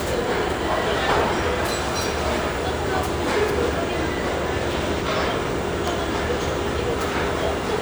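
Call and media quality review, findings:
No faults heard in this audio; nothing to escalate.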